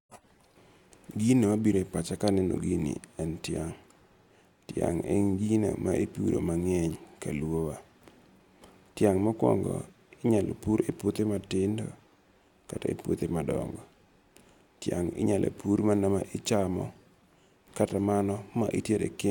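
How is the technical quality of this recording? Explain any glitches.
There's one glitch worth flagging, near the end. At 17.89 s a block of digital silence about 5.8 ms long drops out of the speech, which fits a 256-sample buffer that wasn't filled in time. The hard cut in and out lands as a quick tick.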